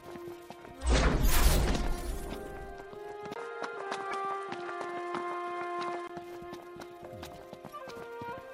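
At 3.34 s a 20 ms silence opens. The sound then turns dull, with nothing above 11.4 kHz. Faint new background noise sits far below the signal. The level holds steady. This is likely an input switched to a poorer device. Full bandwidth returns at 6.09 s.

From 4.09 to 4.13 s a short blip cuts through. This is damaged data in a compressed stream. Corrupted bytes make the decoder misread those frames. It loses sync and searches for the next valid frame header.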